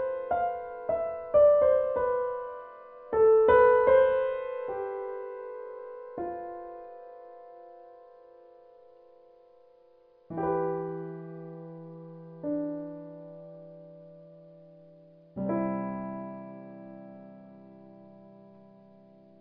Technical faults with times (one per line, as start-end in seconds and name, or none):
none